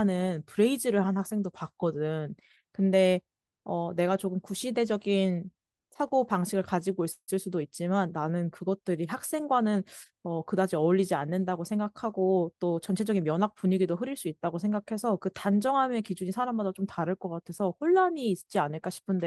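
Speech, with two network playback faults. Packets were likely delayed so the jitter buffer ran dry, a call audio freeze from 7.11 to 7.30 s: the last sound continues as a fading buzz or hiss, then about 70 ms of silence, and the speech resumes intact but 165 ms later. Then the overfull jitter buffer trims short pitch-period pieces, a jitter buffer speed-up from 11.60 to 13.66 s, running speech at 108% at unchanged pitch and dropping roughly 150 ms.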